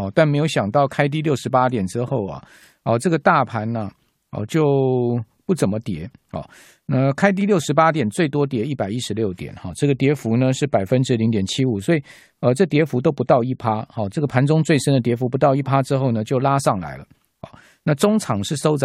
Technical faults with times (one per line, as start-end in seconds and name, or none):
none